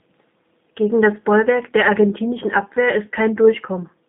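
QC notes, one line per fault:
Throughout: G.729 codec. The speech sounds plainly rough and slightly synthetic, as if rebuilt rather than carried. Low-rate speech coders work this way, modelling the vocal tract and pitch and placing a few pulses in each 10 ms frame. The roughness fits an 8 kbit/s coder, likely the G.729A variant. The band runs from about 150 Hz to 3.7 kHz, so the speech is thin and lacks crisp high sibilance.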